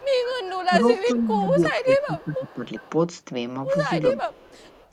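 Echo leak runs through this speech clip at 0.0–0.6 s, 0.96–1.13 s, 1.73–2.89 s and 4.33 s to the end: a faint copy of the far talker returns 396 ms late, roughly 20 to 30 dB under the speech, likely because a loudspeaker echo canceller let residual pickup through. Speech suppressed in double talk appears at 0.69–2.92 s, dipping by up to about 15 dB over roughly 1.5 s in total, and at 4.16–4.33 s, by about 10 dB; with both sides talking, the canceller likely mistook the talker for echo and attenuated both.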